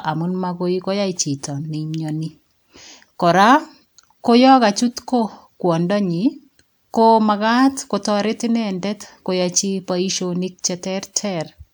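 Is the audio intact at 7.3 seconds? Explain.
Yes, the speech at 7.3 seconds plays through intact, with no audible fault at that moment.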